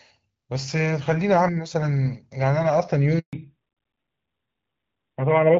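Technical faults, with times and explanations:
3.19 to 3.33 s, handover gap: the speech dies away within a few tens of milliseconds, then 140 ms of clean silence follows while the call switches networks and no frames arrive. Unlike packet-loss dropouts, there is no concealment buzz or repeated fragment, and the sound changes character afterwards.
3.33 s to the end, fallback to narrowband: after the switch, HD Voice is gone and nothing remains above 4 kHz, so the speech turns duller and rougher. Earlier audio reaches about 7 kHz, with light coding fitting AMR-WB at 12.65 kbit/s. The later band fits AMR-NB at 12.2 kbit/s. Unlike a gradual filter, the loss starts abruptly at the gap and persists.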